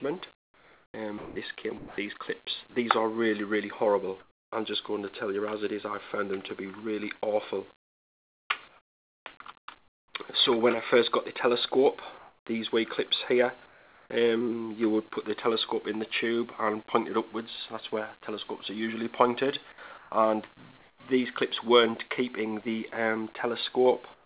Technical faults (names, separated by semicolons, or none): sound chopped by the voice detector; comfort noise in place of the background; sound dropped by the voice detector